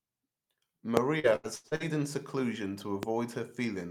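Speech clip with two loud pops, a sharp one at 0.97 to 0.99 s and a milder one at 3.03 to 3.05 s after "in seclusion", each a single pulse well above the speech, likely from a voltage glitch such as a switch or static. Repeated packet loss makes 1.19 to 1.83 s choppy and robotic, just before "in seclusion": five gaps, the longest 82 ms, are patched by extending earlier sound, covering about 45% of that span.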